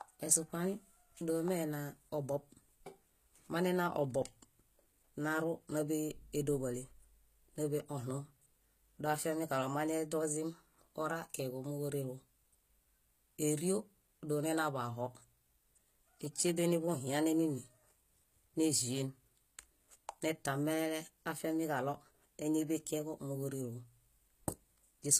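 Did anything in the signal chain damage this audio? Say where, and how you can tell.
Yes, at the codec stage, and it runs through the whole speech clip. The treble is present but sounds synthetic: s sounds come out gritty and lispy, and nothing survives above 14.9 kHz. That points to HE-AAC compression at a low bitrate, likely around 20 kbps. The upper band is rebuilt from copied lower bands rather than coded, so harmonics don't line up across the crossover. A plain low-pass would leave dull but clean treble, not this metallic texture.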